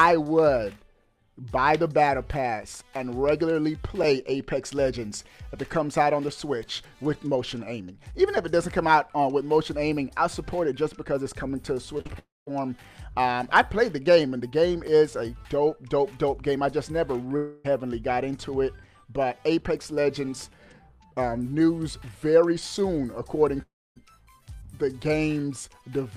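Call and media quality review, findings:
Short concealed packet loss, 11.97 to 12.11 s: three back-to-back gaps (20, 40, 20 ms) papered over by the decoder stretching the last sound, so there's a brief smear and wobble.

Long network dropout, 12.19 to 12.49 s, 17.37 to 17.66 s and 23.62 to 23.98 s, likely on the network side: concealment buzz fades out, then roughly 0.2 s of silence in the first, none in the second, and about 0.26 s in the third before the audio resumes with about 0.3 s missing.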